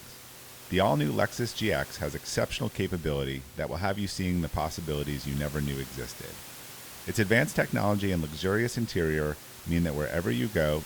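No technical faults are present.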